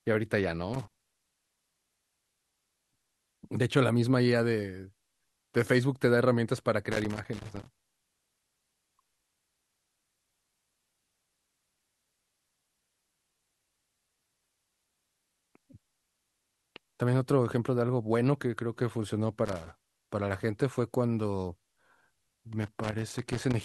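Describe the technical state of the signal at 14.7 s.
At 14.7 s the speech signal is intact, with no audible fault at that moment.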